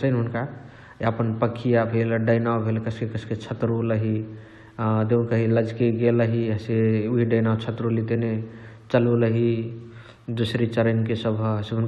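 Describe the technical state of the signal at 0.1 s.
At 0.1 s the signal is intact, with no audible dropout, distortion or other fault at that moment.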